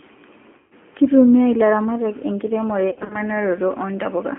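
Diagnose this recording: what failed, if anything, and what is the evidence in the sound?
The codec stage is at fault throughout: the speech has been through G.729 at 8 kbit/s. The band runs from about 200 Hz to 3.4 kHz, with nothing above, and the codec damage is plainly audible as a rough, slightly synthetic texture. The decoder rebuilds each 10 ms frame from a vocal tract filter, a pitch predictor and a handful of pulses, so fine waveform detail is lost and replaced by this coarse approximation.

The network stage failed twice, with VoIP packet loss concealed by the speech codec. From 0.58 to 0.74 s, and again from 2.90 to 3.17 s, the sound smears into a buzzy tone or coloured noise that fades. Each gap points to about 130 ms of missing audio. In the second event the losses are scattered over about 200 ms in runs of up to 40 ms. The decoder extrapolates from its last pitch and filter state while lowering the gain. 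Because each frame builds on the previous one, the sound stays weak for a while after packets resume.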